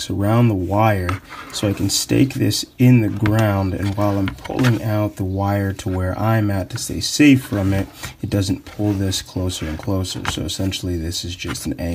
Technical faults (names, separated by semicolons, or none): none